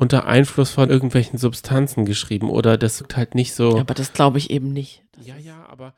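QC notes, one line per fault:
0.86–0.88 s and 3.00 s: damaged data in a compressed stream. Each spot gives a short blip in the speech. Part of the compressed data there is wrong. The decoder misreads those frames and loses its place. It then hunts for the next valid frame header before it can carry on. The first blip lasts about 20 ms. The second is shorter.
4.46–5.32 s: zipper noise. A fast ticking rides on the speech as it drops away. The level falls by roughly 25 dB in hard 1 dB steps, with no smoothing between them. The steps come at about 40 per second. Each sudden jump in gain puts a small click into the waveform. Heard in a row, the clicks make a buzzy zipping texture that lasts as long as the level keeps falling.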